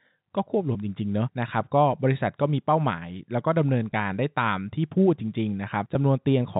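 Speech carried over G.711 telephone coding, band-limited below 4 kHz, with packet loss with pitch repetition at 0.73 to 0.75 s (a 20 ms gap, consistent with two 10 ms packets) and at 3.92 and 5.94 s (10 ms each). Each dropout sounds like a brief held, buzzy tone. On a spectrogram, the harmonics freeze into flat, repeated stripes before fading. In the waveform, the last pitch cycle is repeated.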